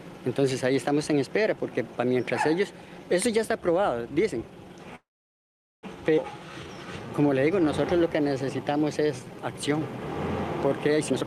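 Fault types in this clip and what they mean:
Call audio freeze: at 4.95 s the sound stalls, likely from packets held up in transit; the last sound continues briefly as a fading buzz, then about 0.79 s of silence. A flat, empty band appears on the spectrogram, and the audio resumes at 5.85 s with nothing lost, only delayed.
Skip ahead: at 6.17 s playback jumps forward, dropping roughly half a second of audio and joining the two sides with a gap of only 5 ms. The waveform shows an abrupt splice, and the spectrogram a sudden change in content with no pause.
Jitter buffer slow-down: from 6.34 to 9.80 s the receiver repeats short pitch periods to rebuild its reserve, adding 364 ms and running at 90% speed with pitch unchanged. The spectrogram shows stretched harmonics and drawn-out segments.
Jitter buffer speed-up: from 10.94 to 11.23 s short pitch-period pieces are cut out to reduce the delay, removing roughly 100 ms and running at 135% speed. 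Harmonics keep their frequency but events crowd together on the spectrogram, and the audio sounds hurried.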